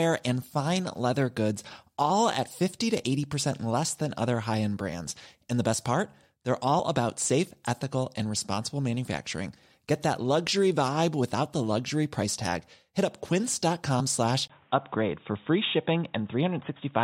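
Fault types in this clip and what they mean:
Compressed frames skipped: the decoder never plays a couple of 21.3 ms frames, either missing or rejected as damaged. The speech jumps ahead by roughly 40 ms at 6.78 s and again at 13.99 s.
Input switched to a poorer device: the input likely changed to a narrower-band device at 14.48 s. After a 20 ms gap, the speech loses everything above 3.8 kHz and stays dull to the end, with faint new noise around 40 dB down and little level change.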